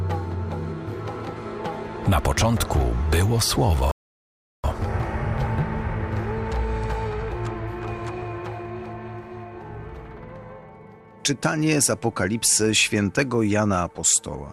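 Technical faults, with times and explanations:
3.91 to 4.64 s, rebuffering stall: the audio drops to silence for about 0.72 s and then picks up at exactly the point where it stopped, with nothing skipped or repeated. The player's buffer of downloaded audio ran empty, so playback halted until more data arrived, then continued from the same position. The material on either side joins cleanly, but the gap stretches the timeline by 725 ms, which is heard as a sudden pause.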